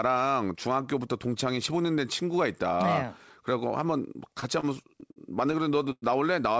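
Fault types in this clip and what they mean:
Repeated stalls (stutter): Packets reached the receiver late, so its jitter buffer kept running dry. Between 4.4 and 6.04 s the speech hitches ten times. Each gap is bridged by continuing the last sound, up to 102 ms. Nothing is lost, but it drags.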